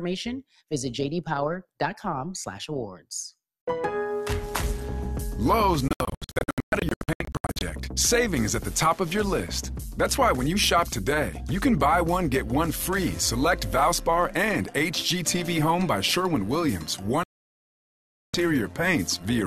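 From start to finish the sound carries a rough, metallic buzz, the level pulsing by about 6 dB at around 150 Hz. This is overlap-add ripple: windowed frames were rejoined with an overlap that does not sum to constant gain, so loudness dips once per frame. From 5.88 to 7.62 s the audio breaks into a string of short silent holes, the longest 120 ms, adding up to about a second lost. A second, longer gap runs from 17.23 to 18.34 s. Both are digital broadcast dropouts, where the receiver muted whenever frames failed until clean data returned.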